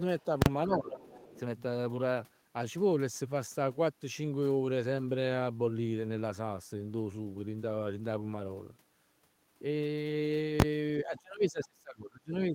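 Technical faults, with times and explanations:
0.20–0.25 s, other side's voice leaking through: a faint scrap of a second voice, about 35 dB below the talker, surfaces for roughly 50 ms. This is likely loudspeaker playback reaching the microphone past the echo canceller.
0.42–0.46 s, invalid numbers at full scale: a 40 ms block jumps to one extreme value. There is a hard pop at each edge and nothing between, because invalid values in the processing were replaced by the largest sample value.
0.66–1.01 s, speech suppressed in double talk: the talker's level sags by up to about 10 dB across some 400 ms, likely because the canceller could not separate near speech from echo while both sides talked and attenuated everything.
1.0–1.4 s, other side's voice leaking through: a clearer intrusion, about 20 dB under the talker, runs for roughly 400 ms. It is likely residual echo that the canceller failed to remove.
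10.60–10.62 s, invalid numbers at full scale: a 20 ms block pinned at one extreme value. With so short a span the two edges merge into a single bang.
11.05 s to the end, speech suppressed in double talk: the talker drops by as much as about 25 dB, likely from the canceller turning down both the talker and the echo during sustained overlap with the far end.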